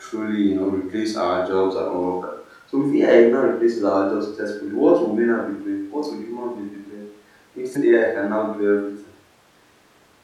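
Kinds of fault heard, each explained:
Damaged data in a compressed stream: in this speech recording, a short stretch of the encoded bitstream carries corrupt bytes, so the decoder cannot parse those frames correctly and loses frame alignment until it locks onto the next valid header. The result is a brief, unnatural glitch of about 40 ms between 7.72 and 7.76 s, where the decoded output stops following the surrounding signal and the normal waveform resumes once sync is recovered.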